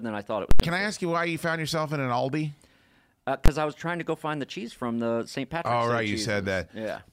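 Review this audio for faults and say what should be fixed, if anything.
Invalid numbers at full scale at 0.51–0.60 s after "than I thought it" and 3.46–3.48 s before "uh I was trying". Infinite or invalid values were pinned to maximum level, giving loud pops around a gap, then one bang. The lengths fit blocks of about 4096 and 1024 samples. To prevent this, check each processing block for non-finite values and replace them with silence before output.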